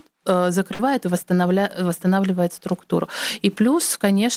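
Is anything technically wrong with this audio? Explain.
Yes, there is one fault. A burst of packet loss at 0.73 to 0.80 s drops about 60 ms of speech. The receiver fills the gap by repeating and fading the preceding sound, which shows as smeared, decaying energy before the speech resumes.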